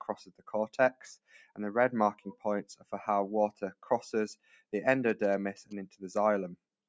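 Throughout, the level pumps and thins by around 10 dB as held tones and tails sink while attacks pass: a speech-oriented noise suppressor left running on this non-speech material. It dips sharply at 0.22–0.48, 1.26–1.58, 2.15–2.45, 2.71–2.93, 3.52–3.87 and 4.35–4.73 s, by about 17 to 19 dB, because the suppressor mistook these steady or decaying sounds for noise and cut them. From 5.09 to 5.73 s a galloping dit-dit-dit of short buzzes at 217 Hz sits about 20 dB under the audio: GSM signalling bursts from a nearby 2G phone rectified by the audio circuit, while the call microphone processing limits the band to 8 kHz.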